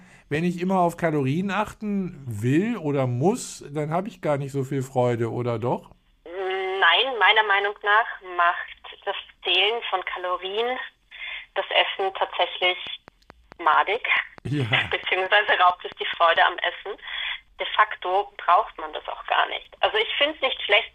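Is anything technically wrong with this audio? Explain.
Yes. From 12.64 to 16.37 s there is a train of clicks: about twenty sharp, near-identical pulses at a regular 4.56 per second, peaking roughly 5 dB above the surrounding sound. The uniform shape and steady spacing point to an external periodic source, likely electrical interference from nearby equipment or a faulty connection or power supply, rather than anything in the recorded material. The result is a mechanical ticking laid over the audio, including its quieter stretches.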